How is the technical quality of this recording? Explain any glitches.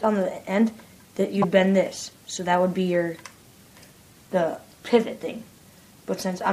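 The recording has one glitch, a corrupt frame decoded between 1.20 and 1.45 s. Around seven consecutive compressed frames carried flipped bits and were played anyway, so misread codes and gains placed energy at wrong frequencies, producing a chirp, squeak, blip or noise burst lasting about a quarter second.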